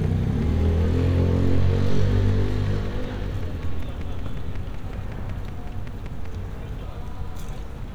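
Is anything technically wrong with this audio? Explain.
Yes. From 0.04 s to 6.26 s there is a train of clicks, likely from interference from nearby equipment or a faulty connection or power supply injecting a short pulse at a steady 5.3 per second. About thirty near-identical ticks result, roughly as loud as the sound itself and audible throughout.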